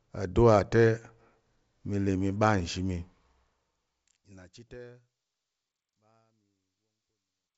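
Nothing technically wrong turns up in this speech recording, which just eases gently down in level from around the 3-second mark as it winds to a close.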